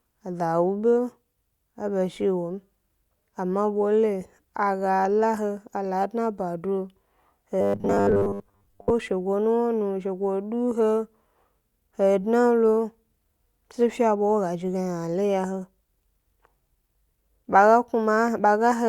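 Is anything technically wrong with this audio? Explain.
Yes. From 7.61 to 8.91 s there is robotic sound from repeated short buffers. New audio likely arrived too slowly, so playback kept repeating a roughly 10 ms slice for most of that stretch. This imposes a rigid 100 Hz metallic buzz that only loosely tracks the speech.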